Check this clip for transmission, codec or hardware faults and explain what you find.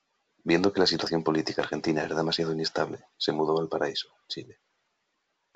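One transmission fault appears. From 2.03 to 2.10 s, just after "la situación política argentina", bit errors on an ADPCM link corrupt the decoder's step size and predictor, producing pops and a rough, level-jumping burst. This fits a low error rate hitting a few frames of the G.722 stream, which elsewhere stays clear.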